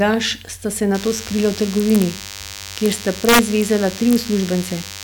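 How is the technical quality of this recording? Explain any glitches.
The recording has two clear problems, so the technical quality is poor.

From 0.94 s, right after "sta se", a DECT cordless phone buzz comes in and stays to the end. A nearby handset or base pulses every 10 ms, the audio circuitry rectifies those bursts, and you get a thin, harmonic-rich 100 Hz buzz sitting roughly 15 dB under the speech.

There's also integer overflow at 1.80 to 2.02 s, 2.86 to 3.62 s, and 4.11 to 4.16 s. Loud peaks push past the integer limit by about 2, 4 and 1 dB, and instead of clamping they wrap to the opposite extreme. That produces harsh, violent cracks, far nastier than ordinary clipping, and the longest run is in the middle stretch.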